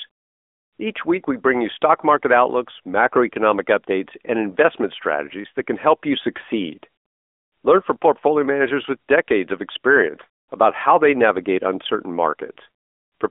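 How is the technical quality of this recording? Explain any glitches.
The recording has phone-line quality from start to end. One fault is present throughout.

AMR narrowband mobile codec: the whole clip carries AMR-NB damage. It rebuilds speech from a vocal-tract model fed by sparse pulses. The band runs about 250 Hz to 3.5 kHz, with nothing above 3.6 kHz. The speech sounds muffled and plainly buzzy. This fits a mid-rate mode near 10.2 kbps.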